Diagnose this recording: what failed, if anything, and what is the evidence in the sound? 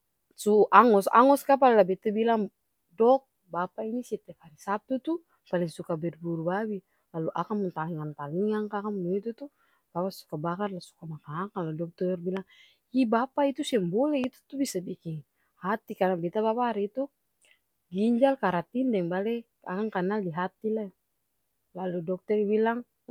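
A loud pop occurs twice, at 12.37–12.39 s just after "lah dokter" and at 14.24–14.26 s just before "itu tuh bisa biking", peaking about 5 dB and about 10 dB above the speech. The likely cause is a voltage pulse in the analogue wiring. Unlike a dropout or buffer glitch, the speech runs on uninterrupted beneath each thump.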